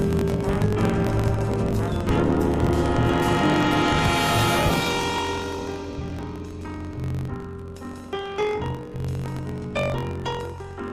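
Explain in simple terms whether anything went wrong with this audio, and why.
A block size mismatch (truncated) runs through the whole clip. One stage sends longer chunks than the next stage reads, so each chunk's end gets dropped. That makes a low buzz near 47 Hz. The audio also plays 1.12 times too fast, at about normal pitch.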